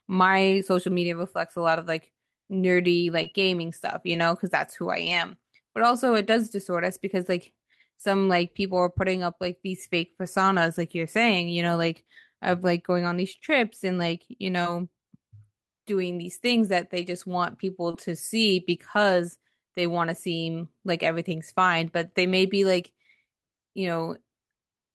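At 3.23 to 3.28 s, 14.63 to 14.67 s and 17.91 to 17.95 s, short concealed packet loss means about 20 ms of the speech arrived too late, so the receiver continued the preceding sound to bridge the gap. Each spot is a brief smear or wobble. Inside each of those gaps, at 3.26, 14.65 and 17.93 s, and also alone at 4.14 s, a lost packet was rebuilt from error correction. The decoder played a low-bitrate 20 ms copy carried by the following packet, which points to a single lost packet each time, and each of these moments sounds rougher and noisier.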